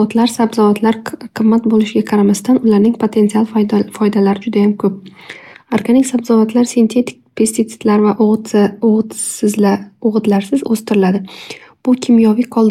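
No technical faults are audible.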